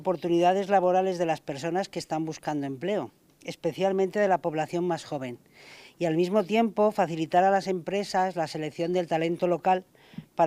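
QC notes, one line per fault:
No faults found. Nothing in the audio calls for a QC note.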